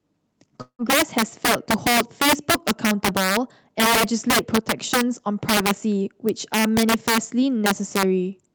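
Right from the start, the speech has integer overflow: the level runs about 9 dB too hot, and instead of being limited, the loudest few percent of peaks wrap round to the opposite sign, giving harsh, violent cracks on the peaks, far nastier than ordinary clipping.

Between 0.61 and 0.82 s there's a break that sounds like a long network dropout, likely a stretch of audio that never arrived. The last sound is smeared into a fading buzz for a moment, then goes silent, and the speech picks up further on with roughly 180 ms simply gone.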